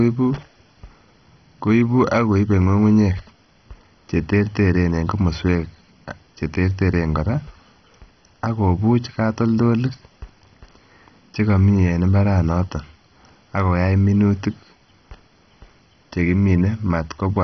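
Throughout, the speech is dull, with nothing above 6.1 kHz. A gurgling, granular texture suggests heavy MP2 compression, likely at a low rate near 32 kbps.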